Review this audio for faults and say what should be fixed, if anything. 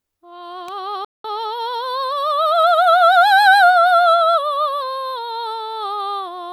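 At 0.68 s there's a sharp snap sitting on top of the music, over in a few milliseconds. That's an electrical switching spike: a nearby switch, motor or static discharge most likely arced, and the audio line picked up the burst as a click unrelated to the playing itself. To prevent it, keep cabling away from switched loads and motors, use balanced or well-shielded runs, and make sure grounding is solid.

From 1.05 to 1.25 s the music simply drops out for about 195 ms, then picks up where it left off. That's a playback stall: the player likely ran dry of buffered data or had its audio thread held up, so the output went silent mid-phrase until it could feed samples again. Giving the playback path a larger buffer and a higher-priority, unblocked audio thread should fix it.

Right after the gap, from 1.25 to 3.19 s, the music runs about 1.1 times fast at its normal pitch. That's time-compressed catch-up: to work off the backlog the stall left behind, the player trims out small slices and cross-fades across the joins, which hurries things along. 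Once the stall itself is fixed this goes away; failing that, let the player absorb the delay rather than squeezing it back out.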